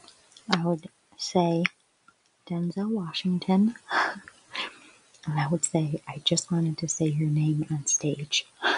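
A noise suppressor built for speech stays active on this non-speech sound from start to finish. It treats steady tones, ambience and decaying tails as background and pulls them down, while sharp onsets slip through. The level therefore swings by around 20 dB as the gain reacts, and the sound pumps and thins. On a waveform the envelope looks chopped, with spikes at attacks and hollow stretches between them. A spectrogram shows sustained bands fading and reappearing in blotches.

The sound cut by the noise suppressor comes in distinct dips. The first runs from 0 to 0.48 s with a drop of about 17 dB, then 0.82 to 1.21 s at about 19 dB, and 1.69 to 2.5 s, also about 19 dB. A shorter dip follows at 3.74 to 3.9 s of about 14 dB, then a long one from 4.2 to 5.27 s of about 17 dB, 5.99 to 6.22 s of about 16 dB, and finally 8.42 to 8.64 s of about 18 dB. In each of these the sustained material sinks and tails end early. 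The waveform shows sudden troughs after the transients, and the spectrogram shows smeared gaps across the held energy.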